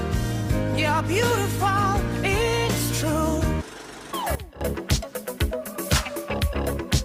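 From 4.35 to 4.61 s, sound and background noise drop together by about 15 dB: a sudden gain jump, likely from an unramped gain change.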